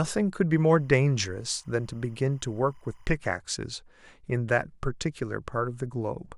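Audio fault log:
0.57–3.06 s, timecode bleed: a faint, steady chirping warble sits behind the speech, roughly 40 dB below it, then stops cleanly at 3.06 s. Linear timecode from an adjacent track or cable is leaking into the audio path. The code is a square wave that flips between two pitches, around 1 kHz and 2 kHz, as its bits change, and at 25 frames per second that switching gives the warble its rapid, regular texture.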